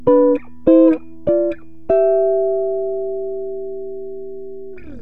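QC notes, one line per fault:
No technical faults can be heard, and the signal keeps unbroken continuity throughout.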